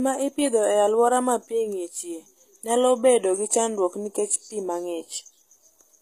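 From start to finish the speech has that HE-AAC compression character: the top end sounds bright but not quite right, with s sounds coming out gritty and lispy, and nothing at all above about 14.9 kHz. That's likely the codec coding only the lower spectrum and rebuilding the treble by copying lower bands upward, so harmonics don't line up across the seam. The damage is plainly audible, which points to a low bitrate, around 20 kbps.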